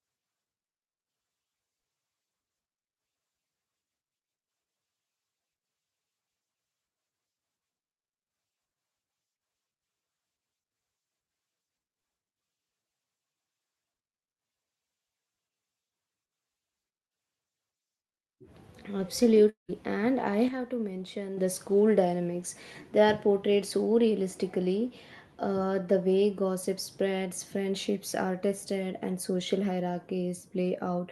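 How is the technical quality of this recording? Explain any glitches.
The speech carries two glitches a few tenths of a second apart, heard over a call-codec path whose spectrum stops near 12 kHz, consistent with Opus at around 32 kbps.

Long network dropout, 19.49 to 19.70 s: the audio likely stopped arriving, so the receiver stretched the last sound into a fading buzz before falling silent for roughly 130 ms. The spectrogram shows smeared harmonics decaying into an empty band; the lost material never returns.

Sudden gain jump, 20.48 to 21.37 s: the level drops by about 7 dB in a single step, speech and background noise together, and stays down for about 0.9 s. On a waveform, the envelope and noise floor shift abruptly, as from a likely unramped gain change.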